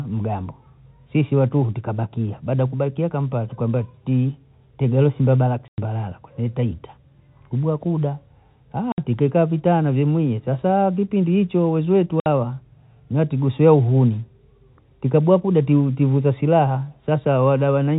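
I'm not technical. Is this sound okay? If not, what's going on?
No. There is packet loss filled with silence: short gaps where pieces of the stream never arrived and the player substituted silence, with hard edges. The gaps are 5.68–5.78 s, after "tukambwa ti tegeresi mbadala"; 8.92–8.98 s, before "tikekaa vitana vyemwie sasa"; and 12.2–12.26 s, after "sasa kipindi hicho weziwetu". Their lengths fit 20 ms packets.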